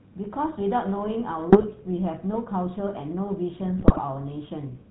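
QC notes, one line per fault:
Throughout: GSM full-rate codec. The speech has a buzzy, gravelly roughness and no content above 4 kHz. The vocal tract is modelled and driven by a coarse pulse excitation, with only every third sample kept. This fits the 13 kbps full-rate coder, and the damage is plainly audible.
1.50–1.65 s and 3.78–3.99 s: GSM bit errors. Short bursts of squawks, pops and gargling break through. Corrupted filter, pitch or gain values bend the spectrum or spike the level frame by frame. The second burst is longer, with a heavier error rate.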